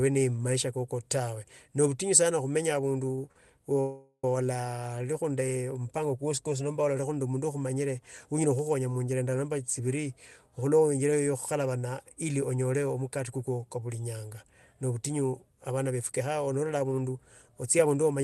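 Right around 3.15 to 3.19 s and again at 3.32 to 3.36 s you get two short stalls from a late packet. Each time a packet shows up late, the jitter buffer runs dry, and the receiver stretches whatever it last had to fill the wait: about 23 ms the first time, 37 ms the second. Nothing gets lost; the audio just picks up where it left off. What you hear is a sound held a hair too long, with a faint buzzy dip.

Not long after, from 3.80 to 4.24 s, there's a proper call audio freeze, most likely from packets getting held up somewhere along the network. The receiver fills roughly 430 ms by carrying the last sound forward as a buzz that fades out, ending in about 50 ms of silence. Then the audio resumes exactly where it stopped, so a gap has been inserted and nothing is missing, and everything after it runs that much later.

At the end, from 15.91 to 18.20 s, a jitter buffer speed-up kicks in. The buffer is sitting on more audio than it wants, so it trims a pitch period or so at a time, over and over, to bring the delay back down. 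Altogether that's somewhere around 150 ms cut. Playback runs at 107% while the pitch stays put, so the speech sounds a bit rushed. Under all of this you can hear the Opus call path's usual coding texture, with nothing above 12 kHz.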